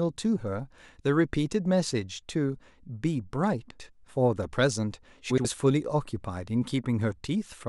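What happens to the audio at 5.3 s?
Frames out of order from 5.3 to 5.45 s: two neighbouring blocks of about 70 ms each, which fits three frames apiece, were decoded in swapped order. The speech there plays with its halves exchanged, a brief garbled flutter with no time lost.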